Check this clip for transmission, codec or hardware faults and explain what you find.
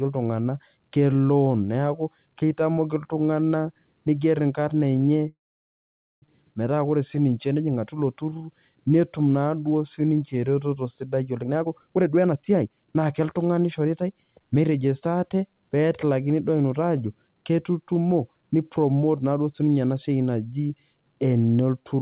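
Two faults are present in this speech clip, which is band-limited to 4 kHz by its G.711 call path.

From 5.28 to 6.24 s there is a call audio freeze. The sound stops, a brief fading buzz gives way to about 0.86 s of silence, and then the speech resumes where it left off. The likely cause is delayed packets emptying the jitter buffer. The waveform shows a gap of about 0.94 s, flat for about 0.86 s of it, and the spectrogram shows a blank band.

From 11.43 to 15.02 s there is a jitter buffer speed-up. The speech runs at 127% of normal rate with unchanged pitch and sounds hurried. The receiver cut out short pitch-period slices, roughly a second in total, to shed excess delay. On the spectrogram, harmonics stay at the same height while the syllables are squeezed closer together.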